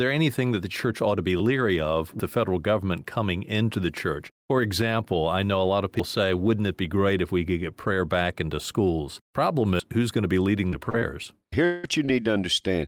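Right at 2.20 s, between "to be leery of" and "the federal government coming", the sound skips forward, and it does the same at 6.00 s after "know a lot of" and at 9.80 s just before "who's going to be". Each jump cuts roughly a fifth of a second, spaced about 4 s apart, which points to audio missing between chunks, likely from a recorder losing a slice at each chunk handover.

Then there's a run of short concealed packet loss at 10.69 to 10.74 s, 10.90 to 10.95 s, 10.99 to 11.03 s, 12.05 to 12.09 s and 12.23 to 12.27 s. Each is 20 to 40 ms of missing audio that the decoder patched by stretching the last sound, so you hear quick smears or wobbles.

Between those, from 11.65 to 11.85 s, there's a longer gap of about 180 ms. It's likely a long network dropout. The receiver fills the whole stretch with a fading continuation of the preceding sound rather than silence, then picks up again with that piece gone.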